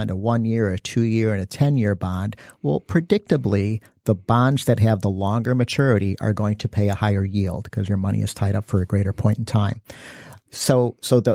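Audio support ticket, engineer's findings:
No audible faults found in the speech recording.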